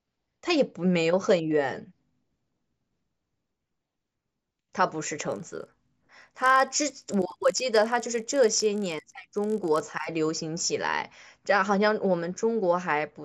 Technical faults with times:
5.28-10.04 resampler restarted on every block

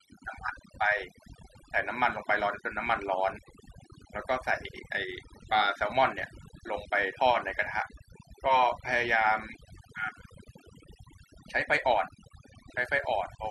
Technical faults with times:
0.00-13.50 overdone noise removal

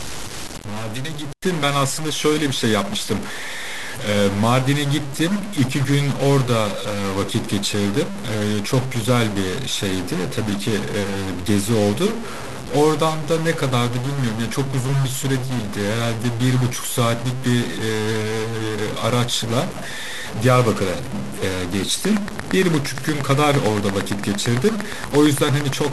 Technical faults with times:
0.00-25.93 stuck bit
22.05-25.86 train of clicks

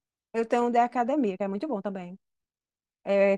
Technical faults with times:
1.06-3.37 time-stretched section

